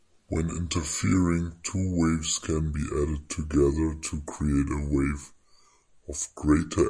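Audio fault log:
throughout wrong sample rate. The speech is slow and deep: 0.69 times speed, 6.45 semitones down. This fits 32 kHz audio played at 22 kHz.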